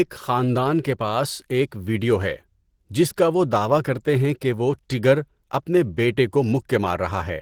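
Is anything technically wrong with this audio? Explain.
Yes. Throughout, the speech sounds muffled, hoarse and grainy, likely from Opus compression in its low-rate hybrid mode. Empty bands get filled with noise, so it lacks MP3's swirling holes.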